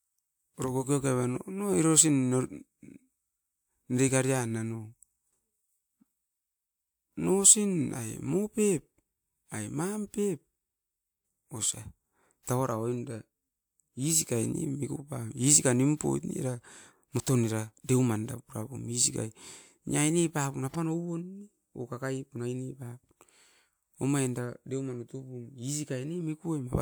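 Nothing in this recording trips any alarm, with no fault turning up anywhere in the speech.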